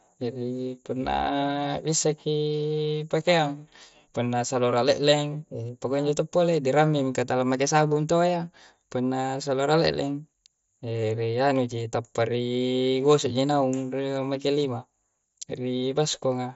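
Nothing goes wrong anywhere in this speech; it's simply coming over a Bluetooth headset link using the mSBC codec, so the sound tops out at around 7.7 kHz, just as you'd expect from that wideband path.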